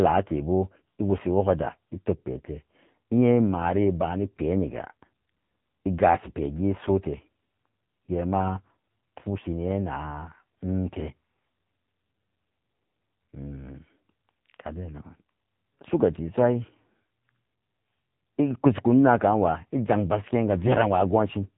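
From start to finish the speech carries AMR narrowband mobile codec damage, and heavily so. Nothing above 3.8 kHz survives, and the low bit budget, which fits the 6.7 kbps mode, leaves the voice buzzy and synthetic. That buzz marks a codec rebuilding speech, not a plain low-pass filter.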